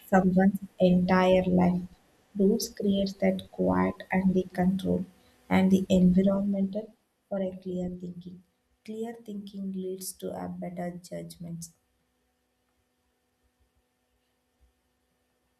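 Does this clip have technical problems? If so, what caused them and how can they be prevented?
Yes. Zipper noise runs from 6.21 to 7.11 s, where the level of the speech falls by roughly 10 dB in coarse unsmoothed steps, around thirty a second, and each jump leaves a small click, giving a rapid ticking under the sound. Smoothing the gain per sample, or ramping it across each buffer, prevents this.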